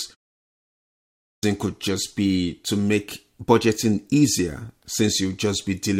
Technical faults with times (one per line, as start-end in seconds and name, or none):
0.95-1.43 clipped start after a pause